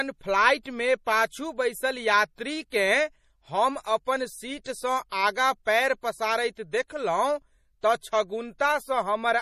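Speech, carrying plainly audible MP3 compression damage throughout: nothing reaches above 15.3 kHz, and weak high-frequency detail flickers on and off between frames, giving s sounds a watery, swirly texture. The likely cause is MP3 encoding starved of bits, consistent with about 40 kbps.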